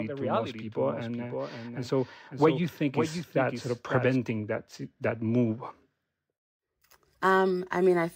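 A doubled audio track runs through this speech clip from the start until 4.16 s, stopping abruptly before "that that move": a dry, somewhat quieter copy trails about half a second behind, likely captured a second time by a slower path.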